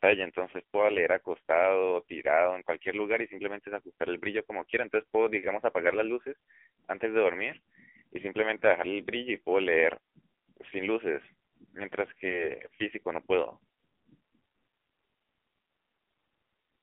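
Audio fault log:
Throughout: AMR narrowband mobile codec, speech band-limited to roughly 250 Hz–3.5 kHz, nothing above 3.7 kHz, buzzy synthetic timbre suggesting a low rate near 6.7 kbps, unlike plain filtering.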